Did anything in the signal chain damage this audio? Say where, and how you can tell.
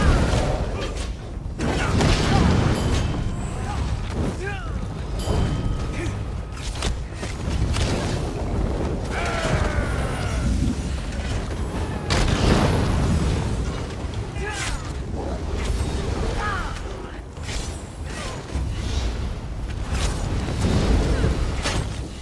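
Yes. From 16.27 s to the end, a 48 to 24 kHz sample-rate converter was restarted on every block, so each 10 ms block was filtered without its neighbours' samples and left a small discontinuity at every edge. At that spacing the ticks merge into a 100 Hz buzz laid over the sound. It is present only while signal is playing, which points to block-edge errors rather than added hum.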